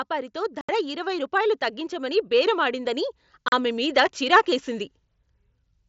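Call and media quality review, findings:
Automatic gain rising, 0.08 to 4.95 s. Level climbs slowly by about 9 dB. Speech and background noise swell together. Component: AGC on the capture path. It judged the input too quiet and kept raising gain gradually instead of stepping it.

Unconcealed Bluetooth headset packet loss, 0.61 to 0.69 s. A 75 ms hole with hard edges. That length fits about ten 7.5 ms headset frames dropped in a row. Link: headset to phone, mSBC wideband. Nothing fills the gap.

Same fault, 3.48 to 3.53 s. A 37.5 ms gap with abrupt edges. That suggests about five consecutive frames lost on the radio link. No concealment, so the dropout is left as a clean cut.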